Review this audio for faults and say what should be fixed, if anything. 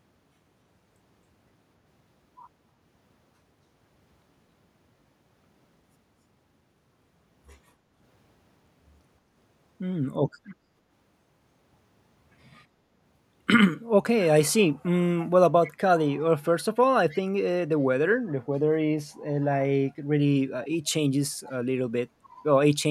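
At 7.8 to 7.94 s the background is gated by the echo canceller: the room sound ducks by about 6 dB for roughly 150 ms, then returns. Unlike a network dropout, the signal never goes silent; only the ambience sinks while the canceller clamps the microphone. Tuning the canceller's suppression to duck less aggressively, or adding comfort noise during suppression, would keep the background steady.

Echo leak appears as brief, faint delayed copies of the talker at 10.48–10.54, 15.64–15.72, 17.09–17.19 and 20.64–20.68 s, each trailing the original by 270 ms. They sit roughly 20 to 35 dB under the speech and are most audible at 15.64 s. The fixed 270 ms lag and discrete repeats set this apart from room reverberation, which decays smoothly. The likely cause is a far end on loudspeaker whose canceller lets residual pickup through. Headphones at that end, or a better-converged echo canceller there, would stop it.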